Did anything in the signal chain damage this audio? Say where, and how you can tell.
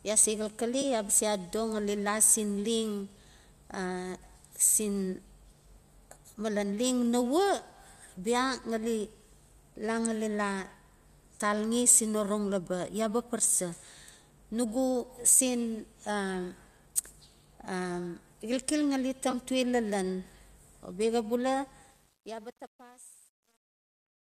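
Yes. At the network and codec stage, AAC frame loss with concealment occurs twice: at about 0.82 s, just after "ya se", and at about 19.31 s, just after "xilxil ngali". Each gap lasts about 20 ms, which fits two of the short 10 ms frames of low-delay AAC, likely AAC-ELD. It sounds like a brief smeared, phasey patch rather than a click or hard dropout, because the decoder rebuilds the missing frames from the last good spectrum instead of leaving silence.

The second fault, truncation distortion on a fade, happens at a digital gain or sample-format stage. From about 21.9 s the closing fade-out, which starts around 22 s and ends at 24.3 s, turns gritty, and from 22.26 s to the end the grit is at its worst. The stage keeps only about 10 bits without dither, so as the level falls the waveform collapses into coarse steps. A clean fade would thin out smoothly; this one disintegrates into grain.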